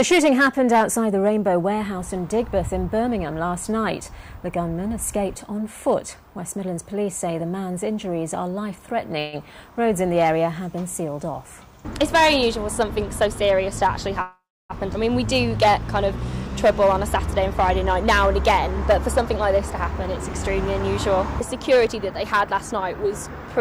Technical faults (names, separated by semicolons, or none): hard clipping; call audio freeze; skip ahead; jitter buffer speed-up